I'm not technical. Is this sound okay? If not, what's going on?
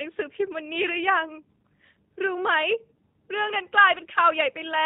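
No. The speech has been squeezed through the G.729 codec, a phone-call compression system that doesn't store the sound itself. It keeps a rough recipe of the voice's shape and pitch and rebuilds the speech from that, in tiny slices. Anything above about 4 kHz is thrown away. The result is plainly audible from start to finish: the voice sounds muffled, slightly rough and artificial, like a cheap internet call.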